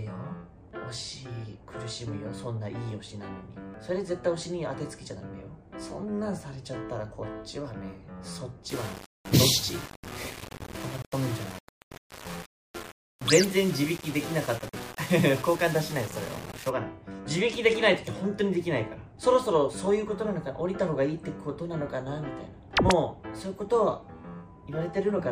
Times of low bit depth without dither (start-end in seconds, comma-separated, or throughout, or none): 8.69-16.69